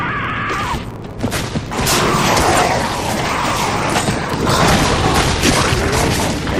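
A steady buzz at 93.8 Hz sits under the whole clip, swelling and fading with the sound's level. It comes from a filter restarted on every block: its state is cleared, leaving a tiny transient at each block start, which fits 512-sample blocks.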